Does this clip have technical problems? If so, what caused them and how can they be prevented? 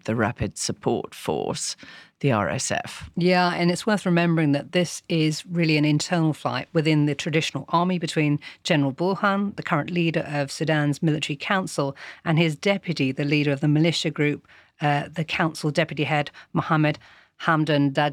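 Yes. Throughout, a faint hiss and roughness rides on louder, brighter speech and vanishes in pauses. This is sample clock jitter of around a microsecond, which mistimes samples most where the waveform is steep. Prevent it by clocking the converter from a stable, low-jitter reference and keeping clock lines short and well shielded.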